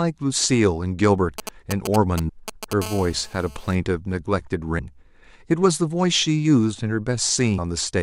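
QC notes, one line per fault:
1.38–2.73 s, GSM signalling bursts: a nearby 2G phone sends short groups of radio bursts while signalling, and the audio circuit rectifies them. The result is a galloping dit-dit-dit of brief 217 Hz buzzes, loud and close to the speech level.
2.28 s, 4.78 s and 7.57 s, damaged data in a compressed stream: corrupted bytes make the decoder misread frames, lose sync and hunt for the next frame header. Each spot is a short chirp or blip in the speech. The first lands inside the burst pattern.
2.82–3.75 s, GSM phone buzz: the phone is now in a call, transmitting steadily at 217 bursts per second, and the rectified pulses give a continuous hard, raspy 217 Hz buzz rich in harmonics. It sits about 17 dB below the speech and is unrelated to it.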